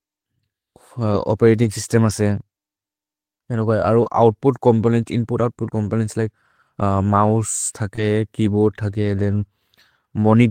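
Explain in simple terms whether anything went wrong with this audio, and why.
Several pieces of this speech went missing in transit and were rebuilt. That is lost packet rebuilt from error correction: the next packet carried a rough backup copy, so there is no gap, but those moments sound coarser and noisier. It happens briefly at 1.63, 4.05, 5.38 (right after "ओउत्पुत् चोम्पोनेन्त्स्") and 7.97 s, and for about 80 ms from 9.31 to 9.45 s.

Twice, audio arrived too late, with no backup: short concealed packet loss. The receiver invented about 20 ms by stretching the preceding sound, then blended back. At 4.03 to 4.07 s, just before "ओउत्पुत् चोम्पोनेन्त्स्", and at 7.96 to 7.99 s, this leaves a brief smear or wobble.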